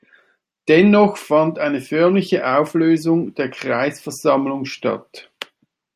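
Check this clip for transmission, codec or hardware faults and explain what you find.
No transmission, codec or hardware fault can be heard anywhere in this speech recording, and the signal holds together as a continuous, intact stream throughout.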